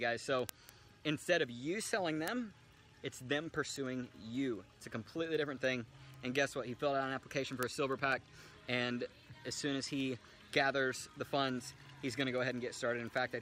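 From 0.20 s to 13.37 s there's a steady run of word clock ticks, roughly ten a second. The receiver isn't locked to the sender's clock and drifts by about 200 ppm, so each slip drops or doubles one sample, leaving a sharp tick.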